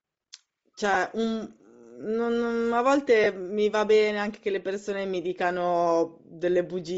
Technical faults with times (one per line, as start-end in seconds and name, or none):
0.00-6.97 Bluetooth LC3 compression
0.94-0.97 lost LE Audio frames
3.24-3.27 lost LE Audio frames
4.86 lost LE Audio frames